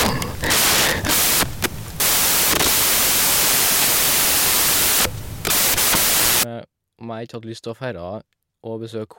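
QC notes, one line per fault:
0.00–6.43 s, samples built from the wrong bytes: misassembled bytes turn low bits into loud white noise; spectrogram flat full-band, waveform a dense, uniform block.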